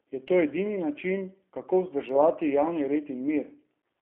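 From start to finish the speech sounds thin, slightly rough and synthetic, confined to roughly 250 Hz to 3.4 kHz: G.729 codec damage, consistent with 8 kbit/s.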